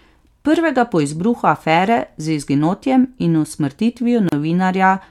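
It's a speech clip with a gap at a join of encoded pieces around 4.29 to 4.32 s: a 34 ms silence where separately encoded segments were butted together without trimming encoder delay and padding.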